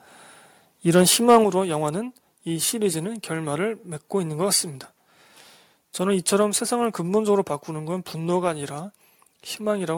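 From 0.95 to 1.01 s and again from 1.28 to 1.37 s, the loudest peaks take on a harsh, crackling edge, which is likely microphone overload. Input ran about 2 dB and then about 4 dB past the converter's limit, so the waveform tops were flattened. Unlike codec distortion, the grit appears only on the highest peaks, and the second, stronger burst is rougher.

At 1.44 s, just after that second burst, the speech and the background together drop by 5 dB in a single step. This is likely the microphone volume being stepped down by the call software reacting to the overload. A smooth automatic gain ride would sink gradually, but here the level falls at once and stays lower.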